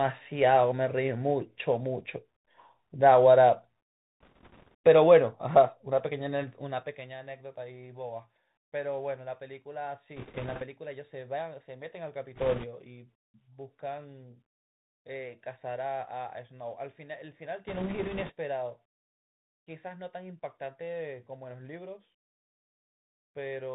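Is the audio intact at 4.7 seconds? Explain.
No. From 4.21 to 4.74 s, bit errors on a Bluetooth voice link scatter a rushing, crackly noise over the speech, consistent with an error rate of a few percent. In CVSD every bit carries the same small step and errors fade quickly, so the result is diffuse crackle rather than the loud clicks or dropouts of lost packets. The Bluetooth CVSD headset codec also shapes this moment: its one-bit up-or-down coding, which fits a 64 kbps link, cuts everything above 4 kHz and leaves a granular hiss, with s sounds turning scratchy. That steady narrowband graininess runs through the whole clip, unlike the brief burst of crackle.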